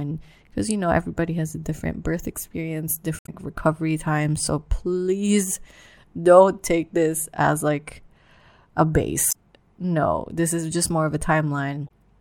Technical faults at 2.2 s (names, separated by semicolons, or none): none